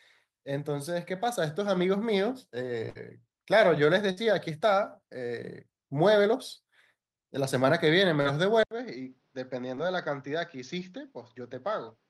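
At 2.89 to 2.97 s and again at 4.11 to 4.19 s there is a burst of packet loss. About 60 ms of speech never arrives each time. The receiver stretches the last sound into a fading buzz or hiss. The speech then resumes with that stretch gone.

At 8.21 to 8.27 s a short concealed packet loss leaves a brief smear. About 40 ms is missing. The decoder patches it by continuing the previous sound, then blends back.

From 8.63 s to the end, the sound turns duller and boxier after an 80 ms silence. This is likely an input switched to a poorer device. Nothing comes through above 6.8 kHz. The level drops by a few decibels. A new noise floor sits well beneath the speech.

At 9.75 to 9.79 s another short concealed packet loss adds a brief smear. About 20 ms is missing.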